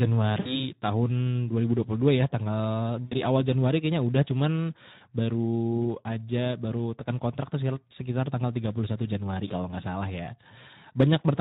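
Right through the speech there's plainly audible Speex codec damage, a hoarse, noisy texture that fits a low setting around 11 kbps starved of excitation bits. From 0.39 to 0.71 s, packet loss concealed by the speech codec smears the sound into a fading buzzy tone or coloured noise, about 60 ms of audio gone, with weakness lingering afterwards. It happens again from 3.05 to 3.15 s, right after "ya tanggal", then a brief 20 ms dropout at 9.47 to 9.52 s just before "nggak salah ya".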